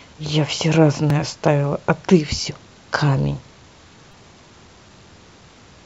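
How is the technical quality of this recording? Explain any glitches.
Two small playback glitches in the speech, both repeated buffers. The device missed new audio and replayed a roughly 5 ms block: once at 1.10 s, giving a click, then four times over 4.12 to 4.14 s, giving a brief buzz.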